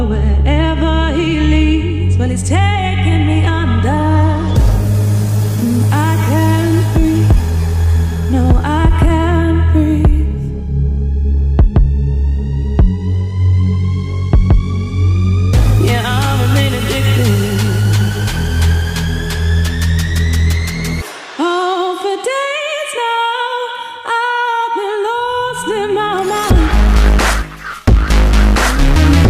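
Nothing in the audio stands out as a fault; it just runs along without anything breaking, dropping or glitching at any point.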